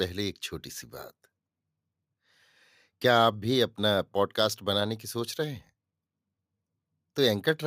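No technical faults can be heard anywhere in this speech recording. Nothing in the signal needs a time marker or a fix.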